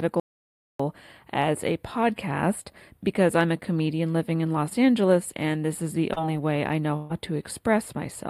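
A speech recording of about 8 seconds carries four distinct faults. Throughout, there is channel delay (comb filtering): one channel lags the other by roughly four samples, well under a tenth of a millisecond, and when the pair is summed to mono the shared content cancels at regularly spaced frequencies. With so short an offset the first notch sits high, around 7 kHz, so the sound is hollow and phasey. From 0.20 to 0.80 s there is an audio dropout to silence lasting about 0.6 s. The signal does not fade. It drops to silence with no room tone left underneath, and whatever was spoken in that stretch is simply gone. That behaviour is most likely an input that disconnected or muted briefly while the recorder kept writing samples, and the hard edges at both ends make the gap plain. At 6.13 to 6.18 s there is short concealed packet loss. About 40 ms of audio never arrived, and the decoder covered it with roughly 30 ms of synthesised continuation extrapolated from the preceding sound before blending back into the real stream, which leaves a brief smear or wobble rather than a gap. 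A larger burst of packet loss follows at 6.96 to 7.12 s. There, about 140 ms went missing, and concealment stretched the last received sound across roughly 133 ms, letting it decay instead of dropping to silence. The result is a held, decaying tail before the audio resumes further along, with the intervening material absent.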